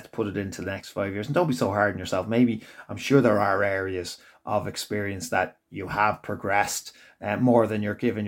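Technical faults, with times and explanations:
No technical faults can be heard anywhere in the speech recording; the signal holds steady with nothing that points to a problem in the recording or playback chain.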